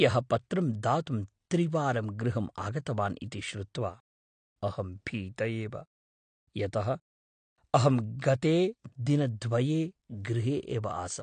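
From start to finish, the speech has likely passed through AAC compression, an AAC-LC encoder working at a rate that fits roughly 32 kbps. Nothing remains above 9 kHz, so the sound is dull and smeared, and coarse quantisation leaves sibilants fizzy and sustained sounds warbling.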